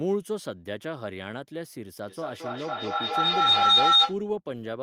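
From 2.07 s to 4.24 s a shrill tone rises out of the speech, its repeats coming roughly every fifth of a second, and climbs to about 13 dB above the talker before it stops. This is feedback howl. Two devices sharing the call in one room pass sound from microphone to loudspeaker and back, each trip adding level, so the repeats grow rather than fade and narrow onto a pitch near 4 kHz that the loop favours.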